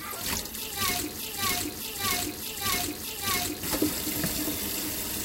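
The player or stream likely stalled on its last fragment: from 1.17 to 3.63 s, a broken-record loop repeats one 0.61 s piece of sound four times.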